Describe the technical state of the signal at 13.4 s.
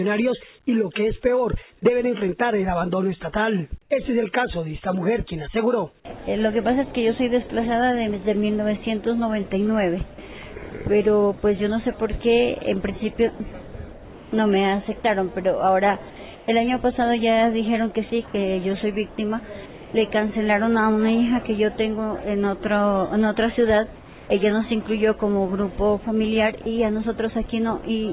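At 13.4 s the signal sits right at the end of a brief sound dropped by the voice detector, running from 13.36 to 13.40 s. The sender's detector likely mistook a quiet stretch of the sound for background and stopped transmitting, so 40 ms was replaced, with about 20 ms of real sound lost. On a waveform the envelope collapses abruptly into a flat, even band of low-level noise. A spectrogram shows the sound's detail cut off cleanly, leaving an even wash.

Overlapping this, comfort noise in place of the background covers 13.36 to 14.32 s, with about 560 ms substituted within that span. While transmission was paused, the receiver likely synthesised noise shaped to the background's rough spectrum in place of the real ambience. It is heard as a steady, featureless hiss without the texture of the surrounding background. A spectrogram shows it as smooth, uniform shading with no fine structure, stopping at 4 kHz like the rest of the narrowband call audio. 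On a waveform it appears as a constant-amplitude band.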